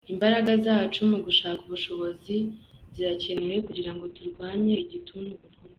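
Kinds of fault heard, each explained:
Call bitrate drop: At 3.39 s the call's bandwidth estimate collapsed, and the Opus encoder was forced onto a far smaller bit budget, consistent with a fall from around 32 kbps to about 7 kbps. For the rest of the clip, roughly 2.35 s, the speech is coded much more coarsely and everything above 4 kHz is cut away, so it sounds muffled and rough with a watery, smeared texture.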